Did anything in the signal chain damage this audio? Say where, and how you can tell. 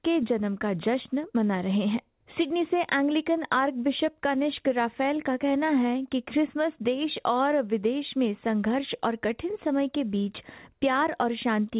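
No, nothing in the chain damaged it; the speech just carries the usual character of a G.711 mu-law phone call at 64 kbps, with nothing above 4 kHz, which is what that codec does by design.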